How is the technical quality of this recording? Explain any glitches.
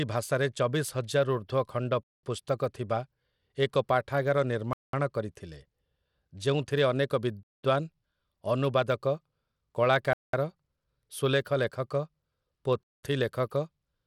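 The recording has two clear technical problems: a steady codec coloration on the speech and a series of evenly spaced silences.

Across the whole clip the speech carries the plainly audible grainy texture of Bluetooth SBC compression, likely the cause given how the damage behaves. Nothing reaches above 17.2 kHz, and the upper treble flickers in and out while a gritty noise rides on the sound. The sound points to a modest bitrate, in the region of 96 kbps. SBC splits audio into a few wide sub-bands and hands out bits with no hearing model, so the weak top bands are starved and the rest are coarsely quantised. That is what separates it from a generic low-pass or MP3-style smearing: the treble comes and goes instead of simply being cut, and the grit is constant rather than swirly.

Five gaps between chunks appear, each 200 ms long, at 2.03–2.23 s, 4.73–4.93 s, 7.43–7.63 s, 10.13–10.33 s and 12.83–13.03 s. 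The audio was handled in 2.5-second blocks, and silence was inserted at each join, so playback resumes exactly where it left off. Unlike packet-loss dropouts, nothing is missing. The holes arrive at a fixed rhythm of about 2.7 s.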